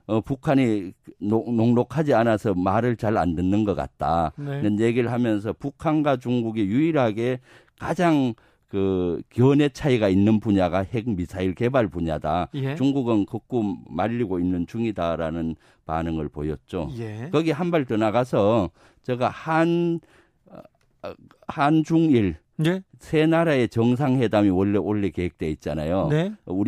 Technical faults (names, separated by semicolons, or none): none